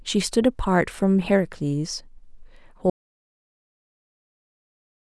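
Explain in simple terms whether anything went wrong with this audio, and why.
Audio dropout to silence from 2.9 s to the end: the speech cuts off into total silence, likely because the input was lost while the recording kept running.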